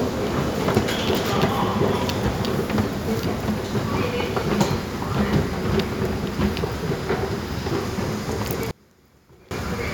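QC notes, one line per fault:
8.71 to 9.51 s, one channel inverted. The sound drops by about 28 dB and turns faint for under a second. The likely cause is one stereo channel flipping polarity, so material shared by both sides cancels when they combine in mono.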